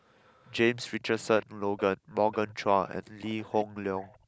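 Echo leak shows up at 0.16, 1.41, 1.77, 2.31, 3.2 and 4.02 s: a faint copy of the speech trailing by 378 ms, likely the far end's echo canceller letting some of the loudspeaker through. Right after, at 4.18 s, the room sound gets gated by the echo canceller, dipping about 14 dB for roughly a tenth of a second.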